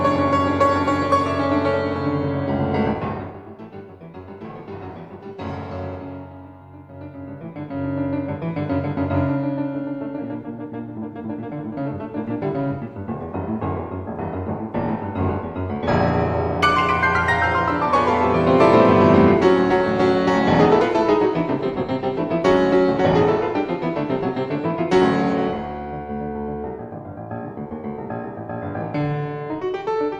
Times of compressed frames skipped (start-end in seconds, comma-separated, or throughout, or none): 20.76-20.79